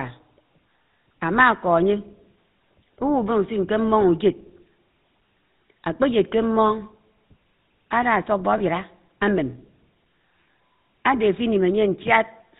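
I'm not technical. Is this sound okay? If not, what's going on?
No. Throughout the clip the speech has a buzzy, gravelly roughness, and nothing high-pitched comes through, so it sounds dull and coarse. That is the GSM full-rate codec, an old mobile-phone format that rebuilds the voice from a crude pulse pattern and discards everything above 4 kHz.

From 8.58 to 8.61 s there is a brief rough, metallic ring where the sound momentarily freezes. That comes from lost GSM frames: a tiny chunk of the signal went missing, so the decoder briefly repeated the previous bit to cover the gap.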